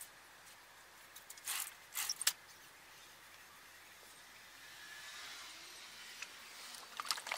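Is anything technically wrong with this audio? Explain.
Yes, there are two short patches of DAB burbling, at 2.07–2.32 s and 6.31–6.54 s. Reception errors slipped past error correction into the MP2 data, at a bit error rate of a few tenths of a percent. That scattered bubbly noise blips and brief level jumps across individual sub-bands, spread over roughly a quarter-second each time.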